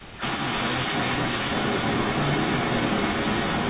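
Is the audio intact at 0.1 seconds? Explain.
No. From 0.0 to 0.22 s, speech suppressed in double talk dips the voice by roughly 15 dB, likely an echo canceller ducking both talkers; the waveform shows a sunken envelope. Across the whole clip an echo leak adds a delayed copy 377 ms behind, roughly 10 dB above the speech, likely from uncancelled loudspeaker pickup. On a spectrogram it appears as repeated speech patterns.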